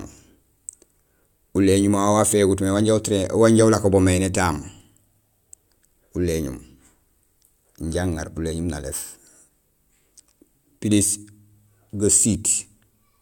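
No technical faults are audible anywhere in the recording.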